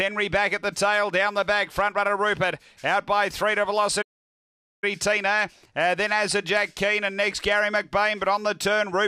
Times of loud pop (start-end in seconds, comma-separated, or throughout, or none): none